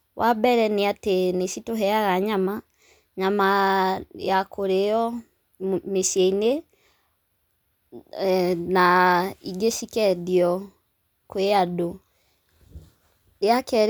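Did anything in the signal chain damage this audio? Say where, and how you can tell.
No, nothing in the signal chain damaged this speech.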